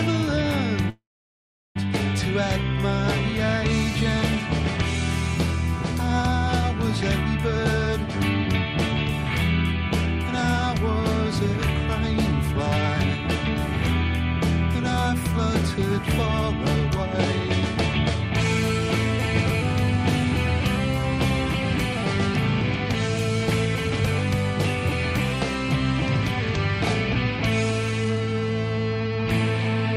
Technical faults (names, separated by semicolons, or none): call audio freeze; jitter buffer speed-up